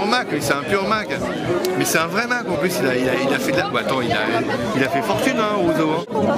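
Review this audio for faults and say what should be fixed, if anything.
Nothing stood out on listening, so there is nothing here that needs fixing.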